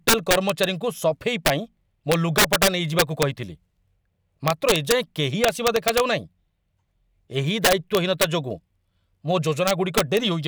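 Harsh, violent cracks break through the loud parts of the speech at 0.08 to 0.64 s, 1.46 to 1.50 s, 2.12 to 3.23 s, 4.48 to 4.92 s, 5.44 to 6.00 s, 7.65 to 8.24 s and 9.68 to 10.17 s. These are integer overflow: peaks driven about 2 to 8 dB past the largest representable value wrap to the opposite sign instead of being limited, sounding far sharper than clipping.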